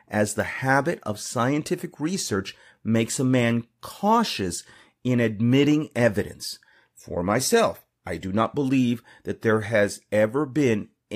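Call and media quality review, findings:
No faults found in this speech recording. Nothing in the audio calls for follow-up on the call or media path.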